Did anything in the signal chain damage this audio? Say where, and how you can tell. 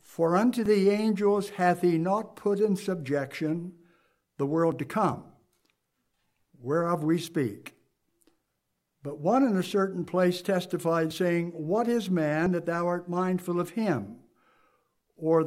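Yes: a dropped buffer (overrun) at the driver stage, heard as jumps with the sound skipping ahead at 0.66, 4.72, 7.28, 11.11 and 12.46 s. Each gap is likely uncollected samples being overwritten, losing up to roughly 20 ms.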